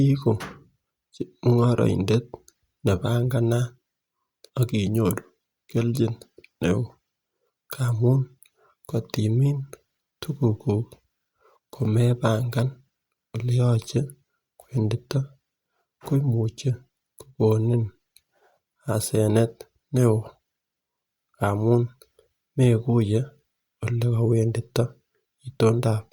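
Nothing in this speech recording points to a technical fault in the signal chain.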